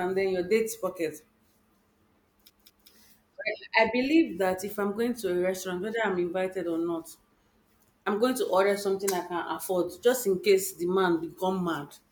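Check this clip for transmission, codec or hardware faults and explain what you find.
One fault is audible in this speech clip. From 2.50 to 2.90 s it is a CD stuck on one turn: a scratch keeps throwing the laser back, so the same 200 ms fragment plays twice with a brief mute at each jump. The result is a quick, even stutter. On a waveform it shows as identical repeated blocks separated by short gaps, and on a spectrogram as a copied pattern with thin silent columns.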